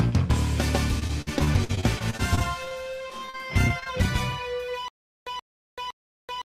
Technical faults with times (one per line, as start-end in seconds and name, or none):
0.99-2.83 repeated packet loss (robotic sound)
3.08-3.87 repeated packet loss (robotic sound)
4.88-6.56 stutter with silent gaps